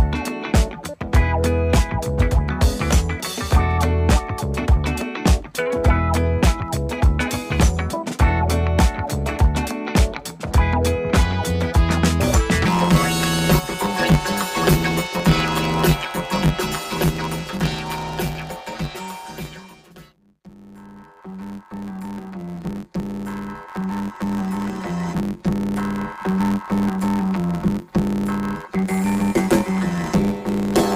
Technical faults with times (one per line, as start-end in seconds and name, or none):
12.65-30.96 planar audio read as interleaved